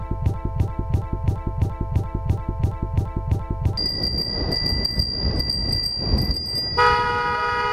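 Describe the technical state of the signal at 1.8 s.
At 1.8 s the signal is caught in a broken-record loop, under way from the very start and lasting until 3.77 s. A 0.34 s fragment repeats exactly, back to back, ten times, likely because playback stalled and kept resending its last buffer. Unlike an echo, nothing decays or overlaps, and the audio that belonged there is lost.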